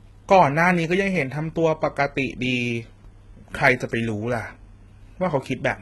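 Throughout the speech, the signal has likely passed through HE-AAC compression at a very low rate, consistent with roughly 16 kbps, where only the lower spectrum is truly coded and the treble is rebuilt by spectral band replication. The reconstructed upper band stops completely at 11.8 kHz, and its harmonics no longer line up with those below the crossover, so s sounds come out gritty, metallic and lispy, with heavy codec damage across the clip.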